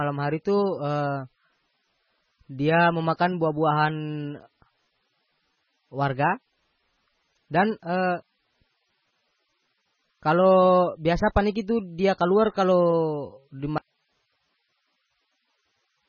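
From the start, the speech carries heavy damage that is likely from MP3 compression. Nothing is left above 6.6 kHz, so the top end sounds dull and closed in. The sound is watery and swirly. Quiet detail flickers in and out from moment to moment. Sibilants come out metallic and chirpy, and attacks are smeared. The encoder was starved of bits, zeroing weak frequency lines and cutting the treble. The damage points to a very low bitrate, around 16 kbps.

At 13.78 s the speech cuts out abruptly and does not return before the end. This is an audio dropout to a faint residue. What remains is only hiss, roughly 50 dB below the speech level. It is not a pause or a fade. The change is sudden. The wanted signal was likely lost, but the path after the break stayed live and kept passing its own noise.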